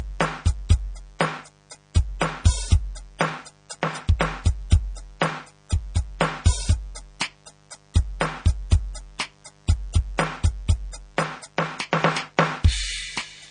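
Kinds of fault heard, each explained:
Mains buzz: A steady, raspy buzz sits under the music for the whole clip, built on 50 Hz with sharp switching spikes whose harmonics reach well into the kilohertz range. It stays roughly 35 dB below the music.
Transcoding between lossy codecs: The music carries two layers of coding damage at once, with nothing above 9.6 kHz. This points to a likely chain of low-bitrate MP3 followed by a lower-rate AAC-LC encode, each adding artefacts.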